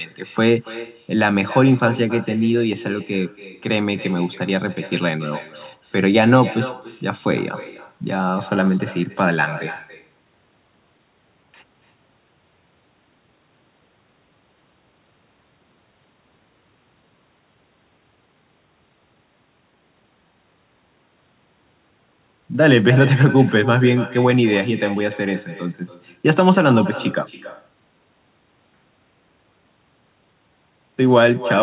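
Throughout the speech, the far end plays the call over a loudspeaker and its microphone returns it with no echo canceller removing it, so every phrase is trailed roughly a third of a second later by a thinner copy about 16 dB quieter, within band-limited audio that stops at 4 kHz.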